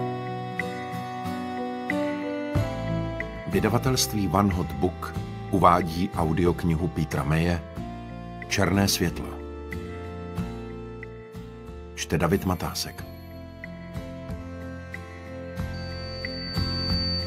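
The audio ends in loudspeaker feedback squeal from 15.73 s to 17.27 s: a pure 4.6 kHz tone swells over about a second and a half until it matches the surrounding sound, as the microphone-speaker loop runs away at that frequency. A spectrogram shows one brightening horizontal line, and the waveform envelope grows steadily.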